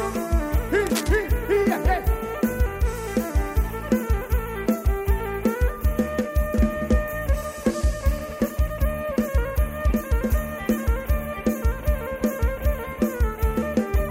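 From 0.86 to 1.16 s there is cable scratch noise: a dense, irregular burst of scratching and rustling laid over the sound, roughly 10 dB below it. Its likely cause is a worn cable, connector or control being moved, making contact resistance fluctuate rapidly.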